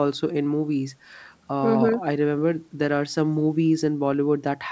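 Nothing's wrong with this bit of speech; it simply carries the ordinary sound of a call, with the microphone processing and the G.722 call path leaving nothing above about 8 kHz, just as they're meant to.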